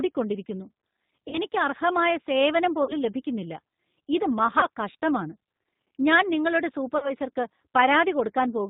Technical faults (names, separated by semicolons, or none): G.729 codec; VoIP packet loss concealed by the speech codec